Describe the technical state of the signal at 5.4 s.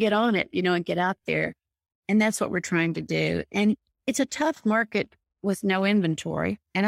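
At 5.4 s the signal is intact, with no audible fault at that point in the speech.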